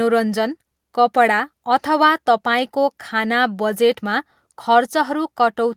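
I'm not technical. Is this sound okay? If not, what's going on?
Yes, this speech recording sounds fine, and I can't hear any technical problem in it. There's nothing here that needs fixing or explaining.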